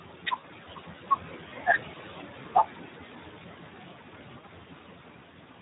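Right from the start the noise suppressor artifacts are there: the background, sitting about 13 dB under the speech, gets pulled down by about 17 dB in the gaps and swells back up under the talking as the band-by-band gain keeps jumping.

Laid over that, the whole clip carries the sound of the Speex codec at a fairly starved setting, which fits roughly 11 kbps. There just aren't enough bits for the excitation, so the speech comes out hoarse and grainy.

Then there's VoIP packet loss concealed by the speech codec, first from 0.38 to 0.45 s. That matches about 60 ms of lost packets. The decoder stretches its last pitch and filter into a buzzy tone or coloured noise that fades, and the speech stays weak for a bit afterwards while it recovers. It happens again, shorter, from 4.40 to 4.44 s, with the same brief concealment and dip.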